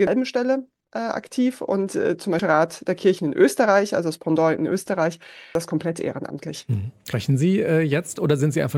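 Right at the start, from 0.07 to 0.16 s, there's damaged data in the compressed stream, and it recurs as short blips at 2.39, 5.55 and 7.13 s. Each time the decoder misreads bad frames and loses sync.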